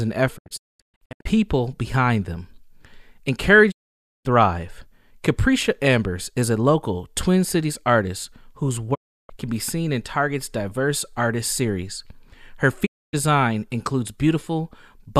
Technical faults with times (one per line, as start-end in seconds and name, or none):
0.37-1.27 digital broadcast dropout
3.70-4.27 digital broadcast dropout
8.93-9.31 digital broadcast dropout
12.85-13.15 digital broadcast dropout